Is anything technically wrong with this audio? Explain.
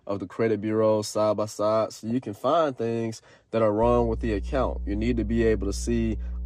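Yes, there are three problems here.

Right through the speech there's a dull, gurgly graininess. That's MP2 compression: the encoder splits the audio into 32 sub-bands and hands out bits, and when bits run short it shuts off the upper bands and quantises the rest coarsely. The top end sounds dull and the highs flicker in and out, which is likely down to a bitrate around 80 kbps.

At 2.10 s, between "side by side so" and "can find things that", there's a brief spatter of watery blips. That's DAB burbling: a small trickle of bit errors slipped past error correction into the MP2 data, so wrong samples put short blips of noise into single sub-bands. It points to only a handful of frames being hit, which is why it's over so quickly.

From 3.83 s, just after "find things that are", a steady low drone comes in and stays to the end. That's mains hum at 60 Hz, probably from a ground loop or a nearby transformer bleeding the power line into the signal. 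It's loud, only about 5 dB below the speech, so it muddies everything underneath.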